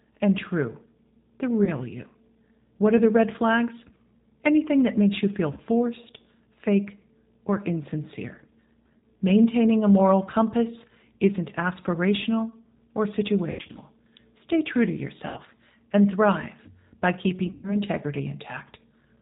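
Throughout, the speech sounds slightly rough and synthetic, with nothing above 4 kHz. That is the G.729 codec, here the G.729A variant at 8 kbit/s, with plainly audible damage. It rebuilds each 10 ms frame from a vocal tract filter, a pitch predictor and a handful of pulses, so the fine detail of the original waveform is replaced by a modelled approximation.

At 1.65 s the sound briefly smears into a short hold. The same happens after "that makes you feel" at 5.53 s and after "fake or insincere" at 8.98 s. Around 13.5 to 13.8 s, dropouts scattered over about 240 ms stretch the sound into a fading smear, followed by a shorter one at 15.28 s. After "and thrive by", around 17.47 to 17.78 s, a run of about 120 ms decays audibly. These are VoIP packet loss events concealed by the speech codec. About 20 ms was lost at the first point, 40 ms at each of the next two, 140 ms, 80 ms and 140 ms at the later three, which fits one to seven packets per event. 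The decoder extended its last pitch and filter with falling gain, and the speech stays weak for a moment after the packets return.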